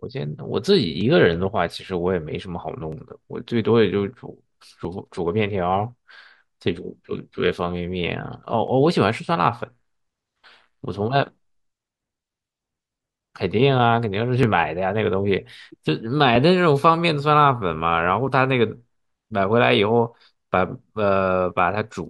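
Clock drift buffer slips run from 1.01 s to 20.2 s: a click recurs every 1.92 s, about ten in all. The likely cause is two unsynchronised clocks, off by roughly 700 ppm, so a block of around 70 samples is dropped or repeated at each slip.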